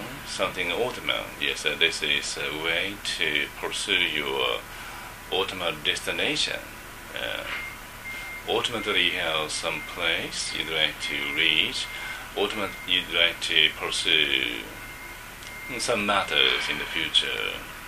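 From about 13.88 s to 17.38 s the audio carries periodic USB or driver dropouts: a short gap opens every 0.125 s, eight per second, roughly thirty in all. Each gap loses around a millisecond of signal, and it is replaced by silence rather than skipped, so the waveform drops abruptly to silence and back. That produces a steady train of ticks riding on the sound, the signature of a background task stalling the USB transfer or audio driver on a fixed schedule.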